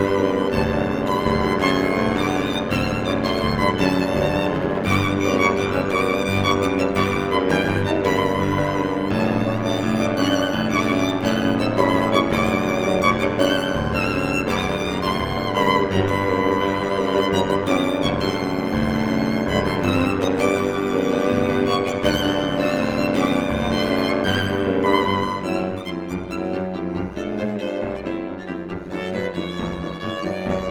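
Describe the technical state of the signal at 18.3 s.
At 18.3 s there's overlap-add ripple running through the whole clip: frames rejoined with uneven gain, so the level dips about 11 dB around a hundred times a second, giving a metallic buzz with extra tones around each note.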